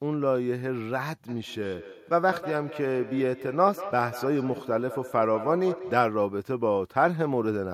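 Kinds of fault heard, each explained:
Feedback echo between two devices: Two devices in one room share a call. One microphone picks up the other's loudspeaker, and neither echo canceller removes it. From 1.29 to 6.21 s the speech returns about every fifth of a second, peaking about 12 dB below it.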